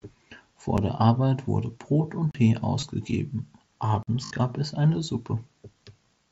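When the program fails to fill its output buffer in time, a block of digital silence replaces the audio, and the abrupt cut to silence and back usually puts a click at the edges. At 0.77 s a gap of about 8 ms is heard as a single tick. At 2.31 to 2.35 s a 35 ms block becomes a short hole.

At 2.80 to 2.83 s, voice packets between headset and phone go missing, and the receiver fills the 22.5 ms loss by repeating the best-matching recent stretch of waveform. This concealed Bluetooth headset packet loss fits three 7.5 ms mSBC frames. As a run of lost frames, it sounds like a buzzy tone.

At 4.03 to 4.08 s another block of digital silence, 46 ms long and fitting a 2048-sample buffer, cuts a hole.

At 4.26 to 4.31 s a longer 52.5 ms packet loss is concealed the same way. Here the repeated fragment is held at full level as a buzzy tone, with a small warble where the real speech returns. Throughout, the mSBC headset link keeps the speech band-limited to 8 kHz, with light graininess on louder sounds.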